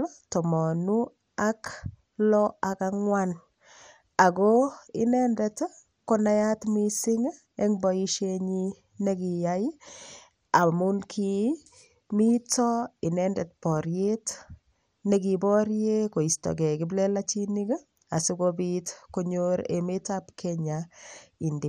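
Throughout the speech, the sound is dull, with a plainly audible gurgling, granular roughness. Nothing reaches above 15.7 kHz. The likely cause is MP2 compression at a rate fitting 64 kbps: starved upper sub-bands flicker off, and the remaining bands are coarsely quantised.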